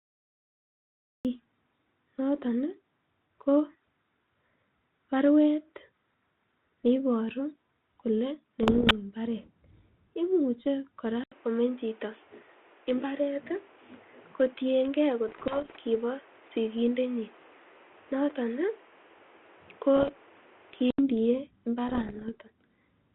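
Cut-off start, 0 to 1.25 s: the recording began late, so the first 1.25 s are digital silence and the sound then arrives abruptly mid-sound, with no natural attack or fade-in, as though the capture was switched on after it had already started.

Bit errors on an ADPCM link, 8.63 to 8.92 s: flipped bits, at a rate around one percent, throw the decoder's step size and predictor off track, so each error rings on briefly as pops, rough bursts and momentary level jumps.

Input switched to a poorer device, 11.24 to 20.99 s: after an 80 ms gap the sound turns dull and boxy, with nothing above 3.5 kHz and a new noise floor roughly 30 dB down, though the loudness stays about the same. This is likely a change to a narrower-band microphone or headset profile. The wider band returns at 20.99 s.

Within that stretch, the same ADPCM bit-error bursts of pops and roughness recur at 15.28 to 15.79 s and 19.96 to 20.11 s, the latter at about 1.5 percent. 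They appear again at 21.89 to 22.30 s, standing out against the faint grain of the 32 kbit/s G.726 coding underneath.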